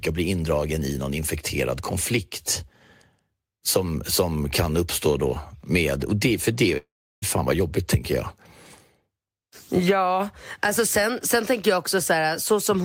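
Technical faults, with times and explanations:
6.77–7.24 s, long network dropout: after "och det för det" the speech cuts off, and the last sound is drawn out into a fading buzz or hiss that gives way to about 350 ms of silence before the talker returns at "fan vad". Roughly 400 ms of speech is lost and never played. The cause is likely a network interruption: the receiver fills the gap by extending the last audio, then resumes about 50 ms later than its earlier timing.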